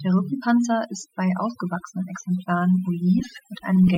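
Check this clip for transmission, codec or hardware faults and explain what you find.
The fault here is overdone noise removal, present for the whole speech clip. A noise reduction stage has been run far too aggressively: any frequency band whose level sits close to its estimated noise floor is pulled down hard or muted outright, and the softer components of the speech fall below that threshold and are removed along with the noise. The gaps between phrases drop to near silence speckled with twinkling artefacts.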